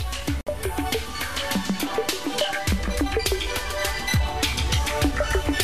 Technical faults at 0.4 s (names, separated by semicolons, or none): gap at a join of encoded pieces